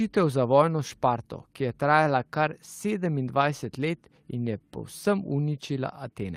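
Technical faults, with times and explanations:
5.03 s, lost packet rebuilt from error correction: a brief stretch of about 20 ms, consistent with a single lost frame, turns rough and noisy with no gap. The next packet carried a low-bitrate copy of the missing audio, and the decoder played that coarser copy.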